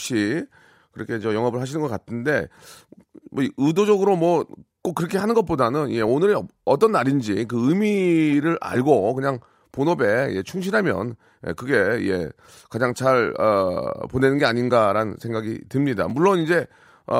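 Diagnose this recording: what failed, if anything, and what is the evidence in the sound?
Chunks out of order at the buffer stage: one 10 ms chunk played a slot late, briefly jumbling the speech at 16.09–16.11 s.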